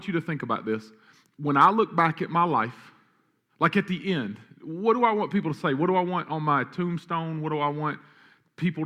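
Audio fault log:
No faults can be heard in this speech recording. Nothing in it calls for an entry in this log.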